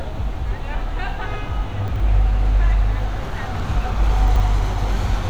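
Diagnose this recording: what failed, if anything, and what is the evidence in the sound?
Chunks out of order, at the buffer or network stage: from 1.88 to 2.0 s and again from 4.28 to 4.4 s the audio briefly jumbles. A 40 ms chunk plays two chunks late, leaving three hard joins. Unlike a dropout, nothing goes missing; the sound is only rearranged.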